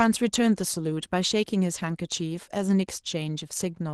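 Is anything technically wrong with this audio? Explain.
Yes. Throughout the speech the voice sounds hoarse and slightly robotic, a sign of Opus voice compression at a low bitrate, roughly 16 kbps. In hybrid mode, the linear-prediction layer codes the excitation coarsely while a thin transform layer covers the top band.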